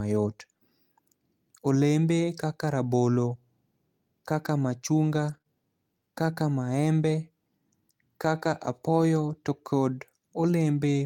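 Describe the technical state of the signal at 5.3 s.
Around 5.29 to 5.35 s there's a lost packet rebuilt from error correction: roughly 40 ms, which points to two packets, played back from their low-bitrate copies, so there's no gap but the speech turns rougher and noisier. Right after, from 5.37 to 5.42 s, comes a short concealed packet loss: about 20 ms missing, papered over by stretching the preceding sound, heard as a brief smear or wobble.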